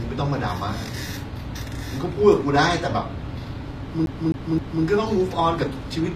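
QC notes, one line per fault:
throughout, HE-AAC compression: plainly audible codec damage, likely from low-bitrate HE-AAC around 24 kbps. The treble is rebuilt from copied lower bands, so its harmonics don't line up with those below. On a spectrogram the upper band repeats lower patterns under a coarse envelope, cut off at 14.9 kHz.
4.06–4.84 s, CD stuck on one turn: the same 0.26 s segment plays three times in a row, each jump marked by a brief mute, giving an even, skipping-disc stutter. The waveform shows three identical blocks separated by short dropouts, and the spectrogram shows a matching repeated pattern.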